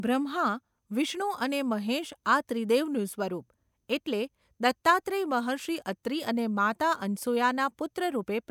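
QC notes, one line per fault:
No faults heard.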